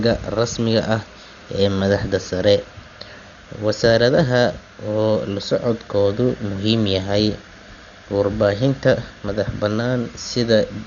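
Speech, dull throughout, with nothing above 7 kHz and rough, fluttering noise around tones. This is likely Dolby Digital compression, heavily damaged at a very low bitrate.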